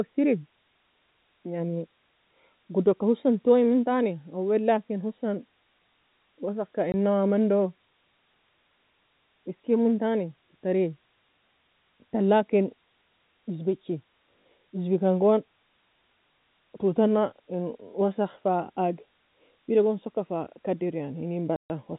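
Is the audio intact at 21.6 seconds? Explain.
No. From 21.56 to 21.7 s there is packet loss filled with silence: about 140 ms of audio dropped out and the receiver substituted silence, which fits seven lost 20 ms packets. The sound stops abruptly and restarts at hard edges.

Also present at that moment is the low bit depth with dither that runs through the whole clip. The signal is carried at only 9 bits, and dither turns the rounding error into a steady, even hiss around 40 dB below the signal, without distortion.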